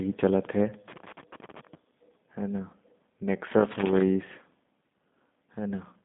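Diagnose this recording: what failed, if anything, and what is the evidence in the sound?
The speech has passed through the G.729 codec, which fits an 8 kbit/s voice link. On a spectrogram the energy sits between about 150 Hz and 3.6 kHz, with nothing above 3.8 kHz. Each 10 ms frame is rebuilt from a vocal tract filter, a pitch predictor and a few pulses rather than the original waveform, so the damage is plainly audible: a rough, synthetic edge.

There are two bursts of loose connector crackle, from 0.74 to 1.75 s and from 3.51 to 4.01 s, which points to analogue wiring. A dirty or worn contact repeatedly makes and breaks while it moves, chopping the signal. The waveform shows ragged gaps across both spans. On a spectrogram they appear as scattered vertical broadband streaks at irregular spacing.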